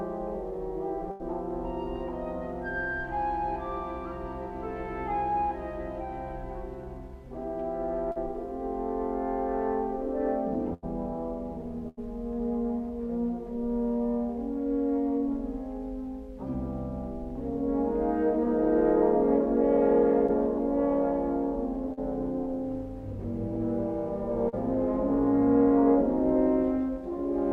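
You'll hear bursts of packet loss at 1.11, 10.74 and 11.88 s. Each time roughly 80 ms of audio never arrived, so the receiver stretched out the last sound, fading it down for about 85 ms, then jumped ahead with that stretch of material simply gone. Shorter concealed packet loss hits at 8.12, 20.27, 21.93 and 24.49 s. Here only 20 to 40 ms went missing, so the patch-in from the preceding sound is brief and comes across as a quick smear or wobble rather than an obvious gap.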